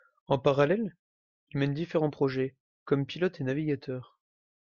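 Throughout the speech, the sound has a watery, swirling quality, and the top end is dull. This is likely MP3 compression. The encoder ran short of bits, so it cut the treble at a fixed point and dropped the weaker frequency lines. Those lines flick on and off from frame to frame, which causes the swirl. The damage is plainly audible from start to finish, and it fits a low bitrate of around 64 kbps.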